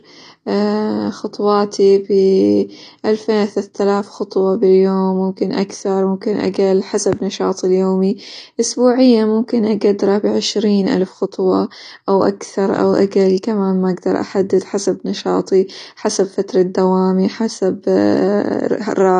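From start to finish the speech carries plainly audible AAC compression damage, likely from an AAC-LC encode at a low bitrate, something like 32 kbps. Nothing survives above 9.6 kHz, so the top end is cut away, and what remains sounds dull and smeared.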